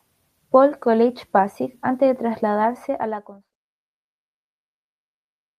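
Nothing stood out on listening; the speech simply fades out smoothly from around two and a half seconds, reaching silence by about 3.56 s.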